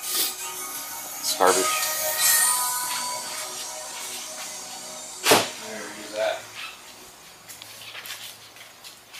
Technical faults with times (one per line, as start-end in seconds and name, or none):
none